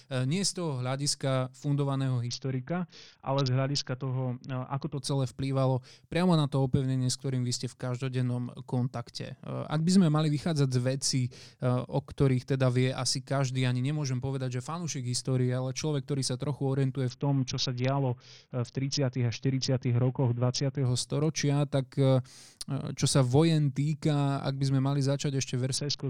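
Bluetooth SBC bit pool drop occurs three times: from 2.27 to 4.97 s, between "z toho hľadiska fundovaného" and "to celé vplývalo priamo", again from 17.09 to 20.85 s, and from 25.77 s to the end. A congested link forced the encoder to starve its sub-bands, which fits a bit pool cut from 28 to 6, near 60 kbps. The speech loses its treble and turns dull, with gritty quantisation noise, before clarity returns after the first two drops.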